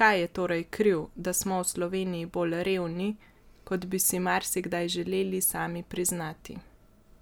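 No technical faults can be heard in the speech recording, and the signal stays continuous and stable throughout.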